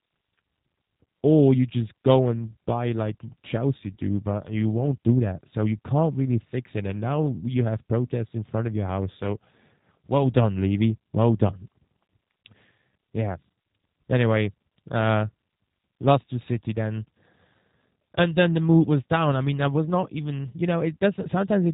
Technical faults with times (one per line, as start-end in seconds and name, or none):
0.00-21.73 G.729 codec